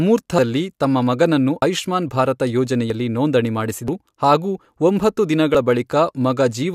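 At 0.38, 1.62, 2.90, 3.88, 4.65 and 5.55 s, the speech jumps ahead, losing roughly 150, 100, 40, 150, 100 and 40 ms. This is likely a dropped buffer (overrun), where unread samples were overwritten. Unlike a dropout, no silence fills the gap, and the two sides join directly.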